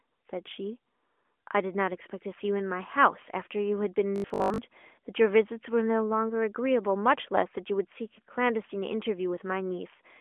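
From 4.16 to 4.58 s the speech becomes a rigid metallic buzz at 50 Hz: robotic sound from repeated short buffers, likely a 20 ms block replayed over most of the real audio.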